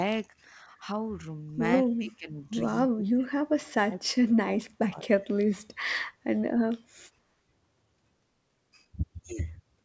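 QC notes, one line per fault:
1.85–2.39 s, 2.83–4.0 s and 4.43–5.27 s, speech suppressed in double talk: the speech dips sharply, by about 25 dB in the first stretch and about 35 dB in the later two. The likely cause is an echo canceller failing to separate this talker from far-end echo while both spoke, and ducking both.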